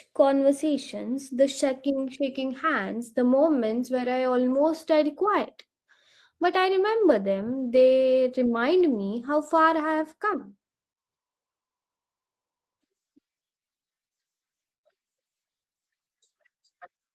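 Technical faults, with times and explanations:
Nothing in this speech recording stands out as a technical fault, so there's nothing to list here.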